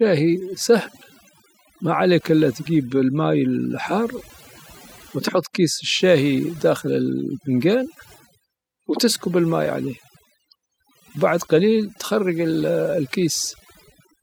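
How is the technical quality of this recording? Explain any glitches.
The main flaw is overdone noise removal, present from start to finish. A noise reduction stage set too aggressively has been cutting individual frequency bands wherever they sit close to its noise estimate, removing quiet parts of the speech along with the noise. The gaps drop and break up into twinkling specks.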